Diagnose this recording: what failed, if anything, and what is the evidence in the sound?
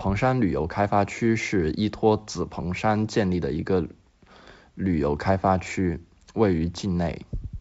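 Nothing failed here: the speech comes through G.722 wideband telephone coding at 64 kbit/s, which keeps the sound clear up to around 7 kHz with at most a faint trace of the codec in the upper band.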